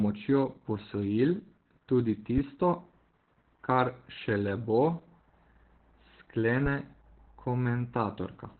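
A speech clip carrying heavy Opus voice compression from start to finish. The sound is muffled, hoarse and slightly robotic, as the SILK linear-prediction coder rebuilds the voice from a coarsely quantised excitation. The coder has also dropped to narrowband, which fits a bitrate of around 8 kbps. On a spectrogram, energy stops abruptly near 4.3 kHz with an empty band above, and the harmonics below look smeared and blotchy rather than cleanly striated.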